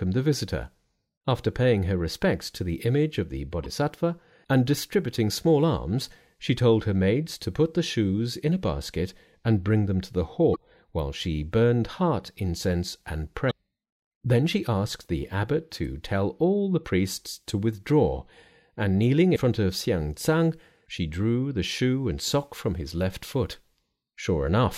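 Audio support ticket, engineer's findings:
Damaged data in a compressed stream: five short glitches in the speech at 3.64–3.66 s, 10.52–10.56 s, 13.47–13.52 s, 15.82–15.85 s and 19.32–19.37 s, each 20–50 ms. Component: decoder input. Corrupt bytes make it misread frames, lose sync and jump to the next frame header. Unlike network dropout or concealment, the cause is corrupt data inside the stream rather than missing packets.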